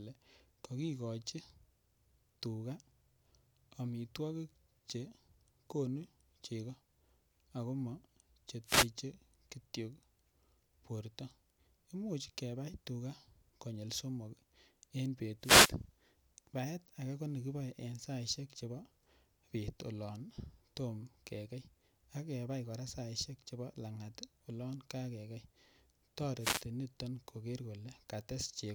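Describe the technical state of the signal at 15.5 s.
At 15.5 s the radio link of the wireless microphone is fading, as reflected signals cancel the direct one and receiver noise climbs. The result is a wireless microphone noise hit from 15.40 to 15.75 s, a brief swish of static.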